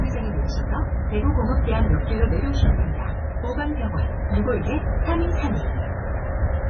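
Heavy MP3 compression throughout: everything above 6.7 kHz is missing, and sparse bits leave watery, swirling textures and smeared attacks, likely from a starved encoder near 16 kbps.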